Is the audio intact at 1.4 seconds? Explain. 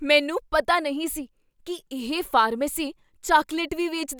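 Yes, at 1.4 seconds the speech is intact, with no dropout, distortion or other fault audible at that point.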